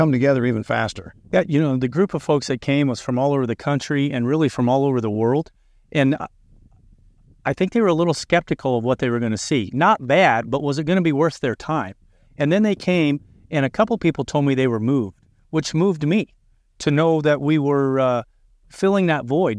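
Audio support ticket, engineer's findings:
Findings: no audio fault detected on the speech path.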